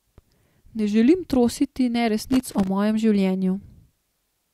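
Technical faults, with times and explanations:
2.30–2.67 s, loose connector crackle: right after "želim trositi" the speech breaks into an irregular burst of crackle and scratching lasting about 0.37 s. A worn or dirty contact is making and breaking as it shifts, chopping the signal on and off, and each sudden jump in any DC on the line adds a pop. The waveform shows ragged dropouts and sharp spikes, while the spectrogram shows scattered broadband vertical streaks across the stretch.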